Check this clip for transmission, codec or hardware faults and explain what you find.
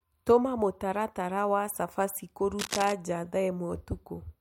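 There's one hardware fault, cable scratch noise, from 2.59 to 2.92 s: a dense, uneven burst of scratchy rustling sitting just under the speech level. It's likely a worn cable or connector being moved, its contact resistance jumping around fast enough to spray noise into the signal.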